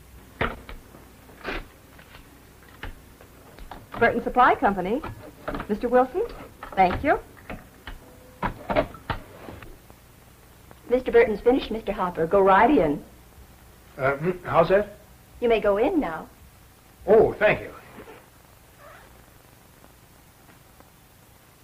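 From 1.60 to 2.77 s the audio runs about 6% fast and sits a full semitone (100 cents) sharp, then snaps back to normal. This is a drift correction step, most likely a clock-matching routine that changed the playback rate in one jump to drain its buffer. Speed and pitch move together, so it sounds like a sudden detuning. On a spectrogram every harmonic line steps up by the same ratio for that stretch and drops back at its end.

At 5.61 s there is a skip ahead. Roughly 0.7 s of audio is missing, and the two sides are butted together with no silence between them. The sound lurches forward mid-stream. A waveform shows an abrupt discontinuity with no gap, and the spectrogram shows a hard vertical seam where the two sides meet.

Right after, from 5.71 to 8.02 s, a jitter buffer speed-up plays the audio about 9% fast at unchanged pitch. The receiver repeatedly cut out short pitch-period slices, about a fifth of a second in total, to bring its delay back down. 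The result sounds hurried. Harmonic spacing on a spectrogram stays the same while events crowd closer in time, and the waveform shows small splice points throughout.

From 12.13 to 13.01 s a second drift correction step goes the other way. The audio slows about 6% and drops roughly a semitone (106 cents) flat before recovering, again likely a rate jump, this time to refill the buffer. The effect is a brief sagging, detuned stretch, and a spectrogram shows all harmonics shifted down together for that span.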